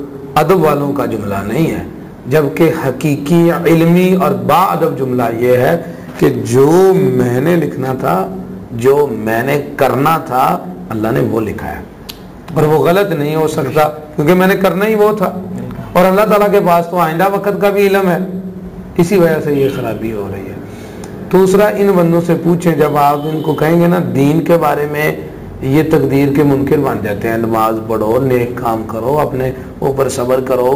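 Imaging from sample-and-hold upsampling runs through the whole clip. The audio appears to have been raised from a 16 kHz rate to 44.1 kHz by simply repeating each sample, with no smoothing filter to remove what that creates. Mirror copies of the spectrum therefore sit above the original band, the first filling 8 to 16 kHz at about 24 dB below the signal. They add a bright metallic fizz that rises and falls with the sound.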